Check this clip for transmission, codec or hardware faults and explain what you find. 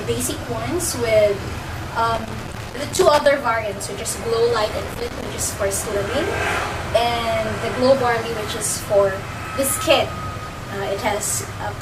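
Two bursts of loose connector crackle, from 2.15 to 3.26 s and from 4.68 to 5.31 s. A worn contact rapidly opens and closes, chopping the signal into irregular scratching. These impulses are random and clustered.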